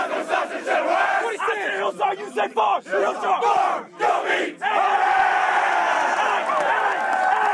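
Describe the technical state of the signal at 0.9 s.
At 0.9 s the signal is intact, with no dropout, distortion, glitch or other fault to be heard there.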